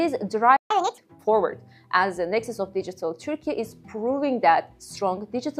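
At 0.56 s the sound cuts to silence for about 0.14 s, until 0.71 s, then resumes where it left off. That is a playback stall, likely the player running short of data. Unlike a dropout, nothing is skipped; the audio simply pauses.

From 0.71 to 0.98 s comes catch-up at higher speed. The player races through its backlog at 1.5 times normal rate, lifting pitch by roughly seven semitones before dropping back to normal. Tempo rises along with pitch, so it isn't a plain pitch-shift fault.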